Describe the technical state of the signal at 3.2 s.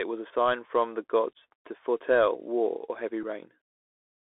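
At 3.23 s a single voice packet between the Bluetooth headset and the phone was lost and not concealed. About 3.8 ms of signal was replaced by silence or an idle pattern. This unconcealed Bluetooth headset packet loss leaves a tiny hole with abrupt edges that can click, and the speech resumes quieter for a moment.

Underneath, the link runs the Bluetooth CVSD headset codec, a one-bit-per-sample, 64 kbps delta modulator whose step size adapts. Together with the line band, this confines the speech to 300 Hz to 3.5 kHz. Its damage is plainly audible here as scratchy sibilants, granular hiss and distortion wherever loud high-frequency content outruns the step.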